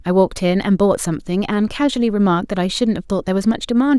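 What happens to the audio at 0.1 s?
Nothing goes wrong at 0.1 s; the speech there plays through intact, with no dropout, click, distortion or other fault.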